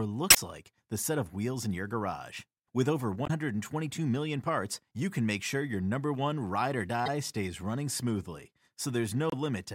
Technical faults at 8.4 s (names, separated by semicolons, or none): none